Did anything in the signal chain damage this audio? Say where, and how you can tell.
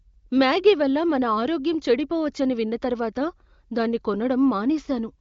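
No, nothing in the signal chain damaged this audio.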